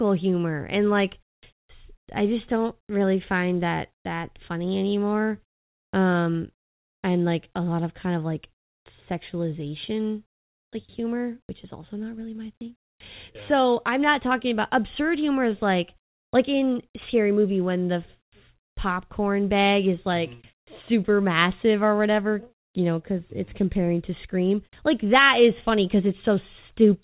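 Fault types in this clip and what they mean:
There are no fault types in this clip.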